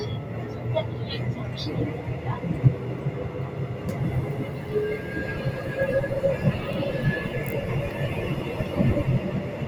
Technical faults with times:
0.00-9.68 noise suppressor applied to music or sounds

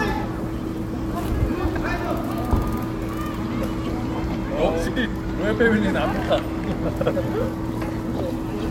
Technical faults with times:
0.53-0.72 frames out of order
1.74-1.86 frames out of order
4.87-5.07 frames out of order
7.01-7.11 frames out of order

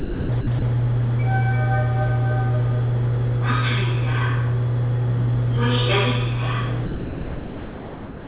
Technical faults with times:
0.00-0.62 sound dropped by the voice detector
6.86-8.27 sound dropped by the voice detector

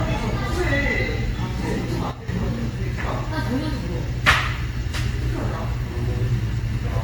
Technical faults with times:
0.00-7.04 generation loss
2.11-2.28 sudden gain jump

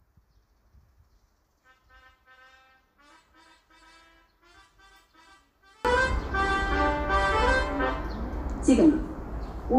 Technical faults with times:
0.00-5.85 one channel inverted

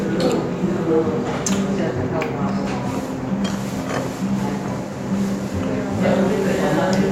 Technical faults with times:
none

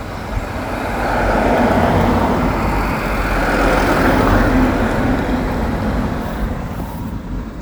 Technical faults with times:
none

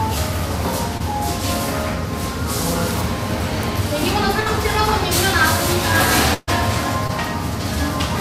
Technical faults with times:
0.97-1.02 short concealed packet loss
4.40-4.48 burst of packet loss
6.34-6.49 burst of packet loss
7.07-7.11 short concealed packet loss

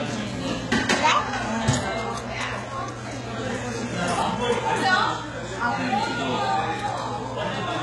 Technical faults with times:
0.00-7.82 HE-AAC compression

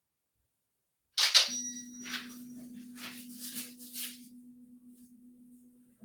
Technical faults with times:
0.00-6.04 noise suppressor applied to music or sounds
4.24-6.04 sound cut by the noise suppressor

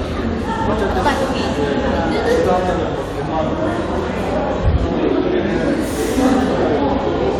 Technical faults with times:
1.05-2.55 crude rate conversion

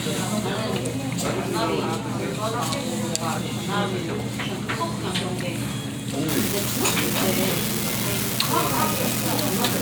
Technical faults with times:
6.29-9.81 unreliable data bit

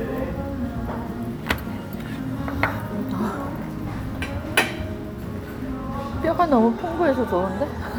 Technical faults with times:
none

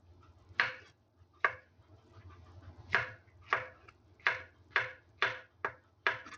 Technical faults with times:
0.00-6.37 noise suppressor applied to music or sounds
0.00-6.37 Bluetooth SBC compression
0.93-1.36 sound cut by the noise suppressor
3.93-4.19 sound cut by the noise suppressor
4.52-4.67 sound cut by the noise suppressor
5.02-5.20 sound cut by the noise suppressor
5.81-6.05 sound cut by the noise suppressor

